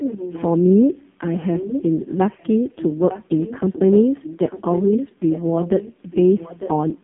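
AMR narrowband mobile codec damage runs through the whole speech recording. Nothing passes above 3.7 kHz, the line band spans about 150 Hz to 3.5 kHz, and heavy coding leaves the voice buzzy and synthetic, which fits AMR-NB's low 5.15 kbps mode. Echo leak appears at 0.0–0.55 s, 1.27–1.83 s and 2.78–7.03 s, where a copy of the voice trails it by about 0.9 s, roughly 10 dB down at first and quieter, around 15 dB down, in the long final stretch. The likely cause is a far-end loudspeaker whose echo canceller let part of its microphone pickup return down the line.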